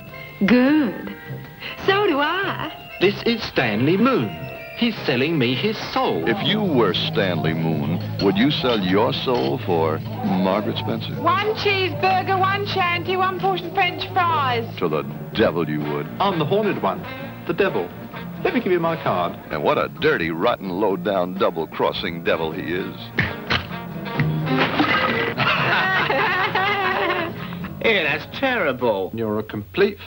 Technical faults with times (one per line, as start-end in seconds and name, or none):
0.00-30.06 video or display buzz